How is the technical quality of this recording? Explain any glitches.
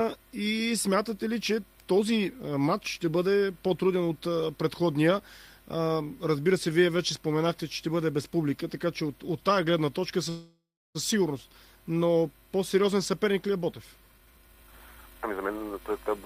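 The recording has two timing glitches near the end, a freeze followed by a hurried stretch.

At 10.29 s the sound stalls until 10.97 s: the last sound carries on as a fading buzz or hiss, then about 310 ms of silence, before resuming where it stopped. This call audio freeze likely comes from delayed packets draining the jitter buffer, adding roughly 655 ms of gap.

From 14.12 s to 16.09 s the audio runs at about 130% speed without any pitch change, sounding rushed. In this jitter buffer speed-up, the receiver repeatedly trimmed small pitch-period slices, cutting roughly 0.7 s to shrink the excess buffered delay.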